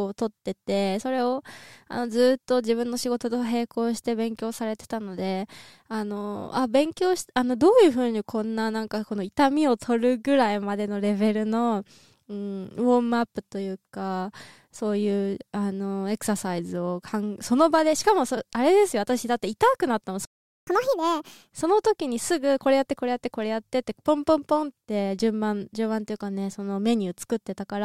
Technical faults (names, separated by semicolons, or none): playback stall; catch-up at higher speed